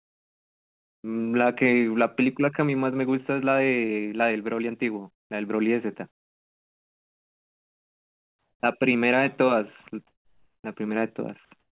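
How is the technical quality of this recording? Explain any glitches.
The recording has two kinds of glitch, both tied to pauses in the speech, heard through a narrowband call path with nothing above 4 kHz.

Comfort noise in place of the background at 0.0–1.04 s, 5.12–5.3 s, 6.11–8.63 s and 10.07–10.64 s: the sender likely stopped transmitting during silence, so a steady, featureless synthetic hiss replaces the real background, about 17, 29, 1 and 12 dB quieter respectively.

Onset clipped by the voice detector at 1.01–1.04 s (30 ms) and 8.61–8.63 s (20 ms): the detector was likely slow to catch speech resuming, so each word starts abruptly, its soft beginning lost under the filler noise.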